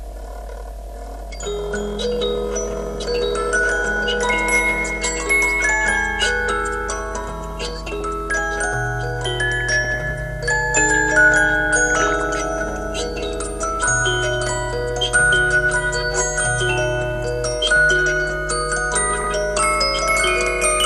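A sound recording with MP2 compression throughout, likely from a low bitrate around 80 kbps: a steady dullness and granular gurgle, with no bursts. DAB burbling is different, with brief bursts of burbling at 2.76–3.07 s, 7.41–8.31 s, 9.60–9.98 s, 11.90–12.35 s and 19.08–19.32 s, caused by reception bit errors corrupting individual sub-bands.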